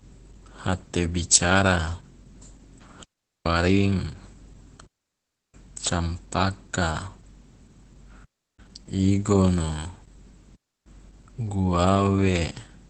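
Opus voice compression runs throughout. The speech sounds muffled and slightly hoarse, with nothing above 8.5 kHz. This points to SILK-mode Opus at around 12 kbps.

Digital wireless dropouts cut clean holes of near silence at 3.03 to 3.46 s, 4.86 to 5.54 s, 8.25 to 8.59 s and 10.55 to 10.86 s. Each time, the receiver muted after losing data. No noise bursts surround the gaps.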